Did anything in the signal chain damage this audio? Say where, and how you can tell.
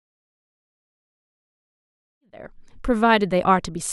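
No; the speech fades in smoothly by 2.76 s.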